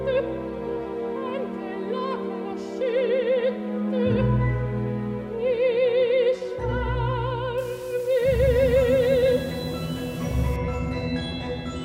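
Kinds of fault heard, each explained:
Low bit depth without dither: From 7.58 to 10.56 s, grainy distortion tracks the sound, about 25 dB down, likely from rounding to roughly 6 bits without dither.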